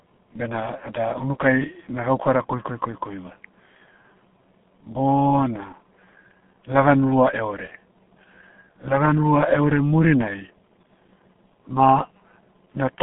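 Speech runs through the G.723.1 codec from start to finish, with nothing above about 3.8 kHz. Heavy low-bitrate damage near 6.3 kbit/s leaves it muffled and hoarse, with smeared consonants.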